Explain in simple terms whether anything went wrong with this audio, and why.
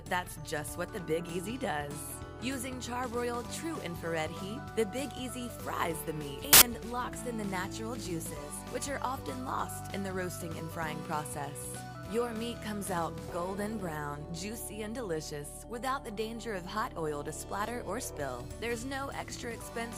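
From 6.53 to 6.62 s, samples built from the wrong bytes: the bytes of each sample were put together wrongly, producing a brief burst of loud, harsh noise.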